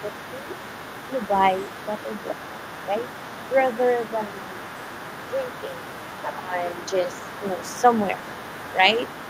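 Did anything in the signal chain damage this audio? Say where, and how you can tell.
Yes. The damage sits at the call-processing stage. Throughout the clip, from 0 s to the end, a second, quieter voice runs underneath the main talker, roughly 15 dB below it. This is the other side's voice leaking through, likely because the echo canceller failed to strip the loudspeaker playback from the microphone signal. Unlike crosstalk from wiring, this second voice is another conversational party whose presence tracks loudspeaker playback rather than a constant electrical bleed.

Speech suppressed in double talk appears in three short stretches: 6.37 to 6.65 s, 6.9 to 7.32 s, and 7.62 to 7.87 s. The main voice ducks there, by around 15 dB in the first dip and by a more modest 5 dB or so in the other two. The likely cause is the canceller's suppressor clamping down when both sides overlap. These dips coincide with the leaking voice, unlike network dropouts, which gap arbitrarily and leave silence or concealment artefacts.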